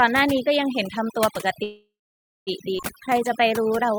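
A noise reduction stage set far too aggressively runs through the whole recording. Any frequency band that sits close to its noise estimate is pushed down hard or cut out, and the quieter parts of the speech go with it. This is overdone noise removal: the background sinks to near silence dotted with twinkling specks.

From 1.63 to 2.49 s there is a call audio freeze, likely caused by packets being held up in transit until the jitter buffer ran dry. With nothing new to play, the receiver stretches the last sound into a fading buzz or hiss, and about 570 ms of that stretch is silent. Roughly 0.83 s of filler is inserted in total. When playback resumes it picks up exactly where it stopped, so the speech is delayed rather than cut.

At 2.77 to 2.81 s the audio skips ahead. A run of audio was discarded while later material was already queued, and playback jumped straight to that later material. 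Only about 19 ms of fill bridges the join, so the jump is close to seamless. Around half a second of speech is simply missing, and the two sides are butted together almost directly.

From 3.01 to 3.98 s a jitter buffer slow-down sets in. The buffer was rebuilding its reserve by repeating individual pitch periods and fragments of pauses many times over. This adds about 105 ms and runs the speech at 90 % of normal speed. The pitch stays the same, but sounds are drawn out.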